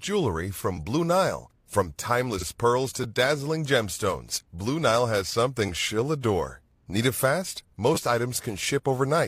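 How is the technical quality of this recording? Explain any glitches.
The recording has two kinds of playback fault: five brief buffer repeats and one repeated compressed frame.

Repeated buffer at 0.77 s, 3.04 s and 4.36 s, then 5.67–5.69 s just before "she'll adore" and 7.95–7.97 s right after "it fast". The output device ran short of new samples and replayed its last chunk, about 10 ms long, once at the first three points and twice at the last two. Each repeat butts against the next audio with a hard edge, so these short glitches come across as a sharp click or tiny buzz rather than an audible stutter, and about 10 to 20 ms of real speech is lost each time.

Repeated frames at 2.37–2.43 s. A stretch of compressed audio was decoded twice, and the 46.4 ms block points to a single codec frame of that length being sent or written again. The same fraction of a second plays back-to-back, which is heard as a quick stutter, and the recording runs 46.4 ms longer than it should.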